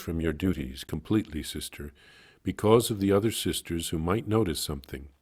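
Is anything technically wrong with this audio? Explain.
Yes. From the start to about 0.94 s, the speech has a metallic buzz with extra tones around it, the level pulsing around 150 times a second by about 6 dB. This is overlap-add ripple. The audio was split into windowed frames and rebuilt with an overlap whose windows don't add up to a steady gain, so every frame boundary brings a dip and a swell in level.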